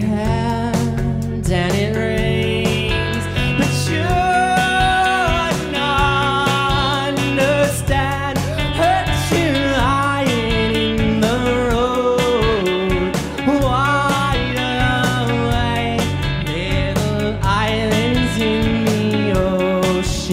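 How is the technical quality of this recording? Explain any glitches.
The recording is technically sound, with no glitches or faults to be heard anywhere in the audio.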